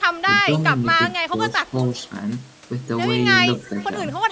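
From 0.45 to 0.86 s and again from 1.31 to 1.94 s, the speech level sags, most likely speech suppressed in double talk. The canceller mistook the talker for echo and ducked it, by roughly 10 dB, then about 5 dB. The waveform envelope visibly pinches there, with thinned spectrogram energy.

At 3.67 to 3.85 s a faint delayed copy appears, likely an echo leak. Loudspeaker pickup slipped past the canceller and returned 249 ms late, about 25 dB below the speech, showing as a weak, time-shifted ghost of earlier spectrogram patterns.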